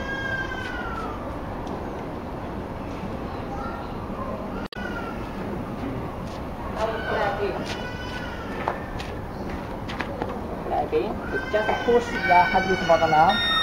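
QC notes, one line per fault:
4.64–4.76 s, damaged data in a compressed stream: a garbled fault of about 0.13 s as corrupted bytes make the decoder misread frames until it finds the next valid header.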